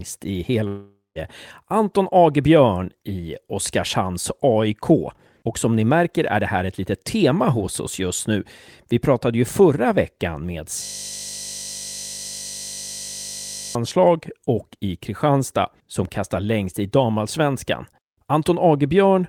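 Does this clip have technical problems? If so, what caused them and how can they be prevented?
Yes. From 0.67 to 1.18 s, roughly half a second of sound is lost, likely a long network dropout: the last sound is stretched into a fading buzz, ending in about 0.16 s of silence. A larger jitter buffer, forward error correction, or a more stable network link would prevent this.

Right after "ju förra veckan med", from 10.84 to 13.75 s, a system hang loop repeats one 20 ms buffer, producing a steady 50 Hz buzz. Fixing the driver or system stall, and muting output when the audio thread stops updating, would prevent this.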